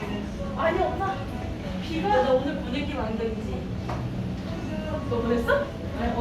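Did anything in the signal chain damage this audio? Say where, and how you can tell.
No, nothing along the chain seems to have left a mark on this one, and it just sounds the way it was captured.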